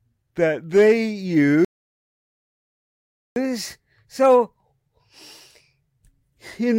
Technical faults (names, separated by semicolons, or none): playback stall; catch-up at higher speed